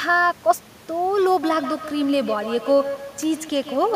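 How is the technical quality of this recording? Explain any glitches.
The recording has one clear glitch: feedback echo between two devices, from 1.43 s to the end, where each phrase returns roughly every 150 ms, about 11 dB below the speech. A second device on the call replays the microphone's sound, which that microphone captures again, beyond its echo canceller's reach. The room noise sits about 25 dB below the speech.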